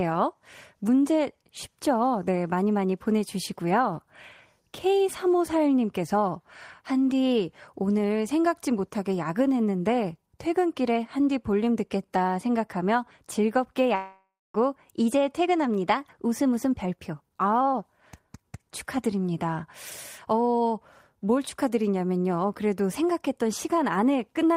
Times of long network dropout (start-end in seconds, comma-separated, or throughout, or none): 13.95-14.56